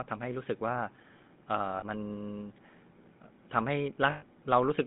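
Throughout, the speech carries the buzzy, gravelly texture of the GSM full-rate codec, which fits a 13 kbps stream. The codec rebuilds each voice from a vocal-tract filter driven by sparse, evenly spaced pulses, so fine detail is lost and a rough edge remains, plainly audible here. The band runs from about 150 Hz to 3.7 kHz. A spectrogram shows a hard ceiling near 3.7 kHz, smeared harmonics and grainy noise between them.

At 1.78 to 1.83 s, lost GSM frames cut in for about 40 ms, which points to two missing frames. The decoder fills the gap by reusing the last good frame, giving a brief metallic ring rather than a dropout. A spectrogram shows a short stretch of frozen, repeated spectral pattern, and the waveform shows a small, repetitive block.

At 4.1 to 4.24 s, lost GSM frames return for about 120 ms, suggesting six frames were lost. The held frame repeats, giving a rough, ringing tone. 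A spectrogram shows identical horizontal bands stretched over the gap. The waveform shows a run of near-identical cycles.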